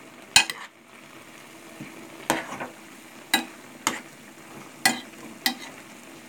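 Nothing in this short run of sounds gives any sign of trouble; it all comes across just as you'd expect.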